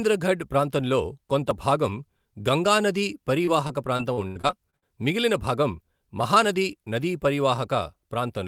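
Speech, with repeated packet loss (robotic sound) from 3.45 to 4.84 s, between "కొంత భాగం గంగా నదీ" and "మిగిలిన భాగం మహానది నదీ". About ten short dropouts, the longest 85 ms, are patched by extending the preceding sound, giving a choppy texture over roughly a fifth of that stretch.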